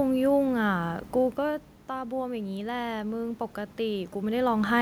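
Automatic gain rising from 1.87 to 4.43 s: input fell about 10 dB, so gain crept up about 4 dB, lifting speech and noise floor in a slow waveform swell.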